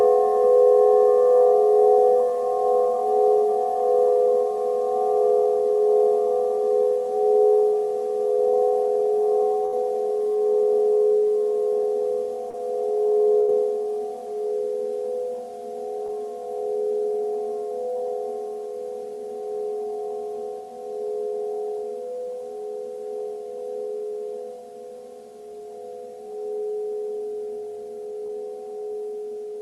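At 9.65 to 9.74 s comes the first burst of packet loss: several consecutive packets failed to arrive in time, so the receiver stretched the last sound for about 67 ms, fading it as it went, and then jumped ahead with roughly 60 ms of audio gone. It sounds like a short held buzz or hiss followed by an abrupt resumption. On a spectrogram the sound runs flat and dim, then meets a hard edge.

At 12.50 to 12.55 s a short concealed packet loss leaves a brief smear. About 33 ms was synthesised from the preceding sound in place of around 40 ms that never arrived, so a quick detail blurs. In the waveform the gap is papered over by a smooth, synthesised stretch.

At 13.39 to 13.50 s a second, longer burst of packet loss brings about 90 ms of decaying continuation and roughly 80 ms missing. The spectrogram shows a longer frozen, fading band before the sound picks up again.

Two more short concealed packet losses follow, at 16.06 to 16.10 s and 28.26 to 28.31 s, each about 20 ms. 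They are heard as brief smears or wobbles, and on a waveform they show as short patched stretches that blend back into the real signal.

Throughout, the Opus call path's coding limits the spectrum to about 12 kHz, so the spectrogram shows a clean ceiling there.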